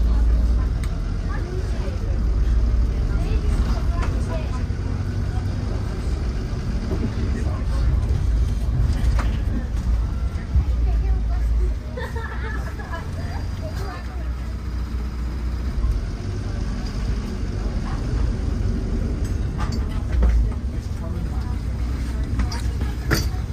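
No technical faults can be heard anywhere in the audio. At no point does the sound stop, jump or change character in a way that points to a problem with how it was captured or delivered.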